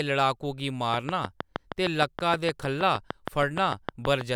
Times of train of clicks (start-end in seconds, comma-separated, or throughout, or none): 0.94-4.22